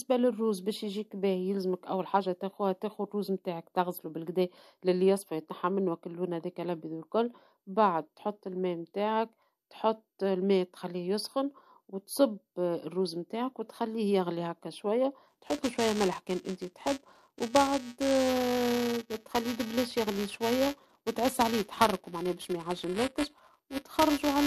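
At 15.28 s, right after "وتخليه يغلي هكا شوية", buffer tearing sets in and lasts to the end of the clip. The write and read positions in the playback ring buffer have drifted so they cross within every period. A small slice of each buffer replays audio a few milliseconds old, with hard splices at both edges. The result is a robotic buzz at 345 Hz under the speech, which fits a 128-sample buffer.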